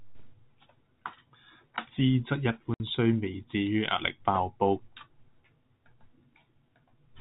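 Speech over a telephone-band G.711 channel, with nothing heard above 4 kHz, drops out completely from 2.74 to 2.80 s. This 60 ms gap is packet loss filled with silence: the receiver had no audio for that stretch and played silence, which fits three lost 20 ms packets. The gap has hard edges at each end. On the waveform it shows as a flat line with abrupt edges, and on the spectrogram as a blank vertical strip.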